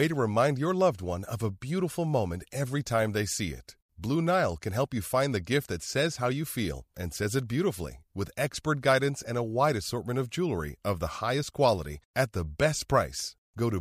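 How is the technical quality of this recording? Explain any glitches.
No glitches can be heard anywhere in this recording. Nothing in the speech calls for explanation.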